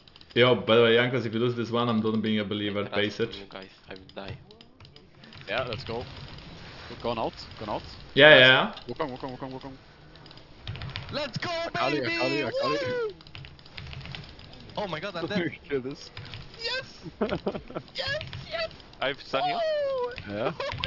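Right from the start and all the way through, there's aliasing. It sounds like the audio was taken down to a much lower rate, something like 48 kHz to 12 kHz, without a proper filter first. Everything above the new limit of 6 kHz has folded back down into the band at unrelated pitches. The folded energy sits somewhere around 25 dB below the main signal, so the highs come across gritty and metallic, with the spectrum packed right up to the 6 kHz edge.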